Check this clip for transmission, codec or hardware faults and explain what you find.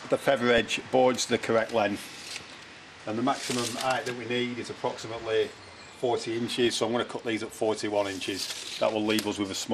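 Yes, two faults are present, one throughout and one in two short bursts.

Throughout, the sound is dull and granular, with a gurgling edge. This is likely MP2 compression, fitting about 80 kbps. Upper sub-bands starve of bits and drop out, unlike the steady smearing of other codecs.

From 0.58 to 0.81 s and from 6.47 to 6.70 s there is DAB burbling. Reception bit errors near a few tenths of a percent get into the audio data, so wrong samples put short blips of noise into single sub-bands rather than leaving them simply dulled.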